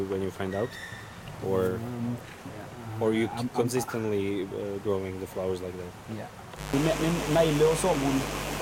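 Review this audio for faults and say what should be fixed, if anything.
A steady, raspy mains buzz enters at 6.56 s and runs to the end of the clip, sitting only around 10 dB below the wanted sound, so it is plainly audible. Its rasp comes from sharp switching spikes, from something like a dimmer, a rectifier or an unshielded cable, that arrive twice per 50 Hz cycle, spreading harmonics of 50 Hz up into the kilohertz range. To prevent it, keep dimmers and switching supplies off the recording circuit and use properly shielded, grounded cabling.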